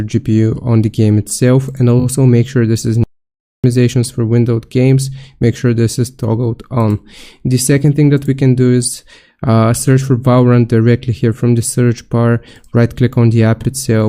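A short stretch of audio with two kinds of fault. There are repeated frames at 1.99 s, where a single 20 ms frame plays three extra times for a quick stutter that adds 60 ms, and at 13.61 s, where a 40 ms block plays once more and adds 40 ms. Between 3.04 and 3.64 s there's an audio dropout to silence: about 0.6 s of silence with no room tone, likely from the input cutting out while the recorder kept writing, so whatever sounded in that gap is lost.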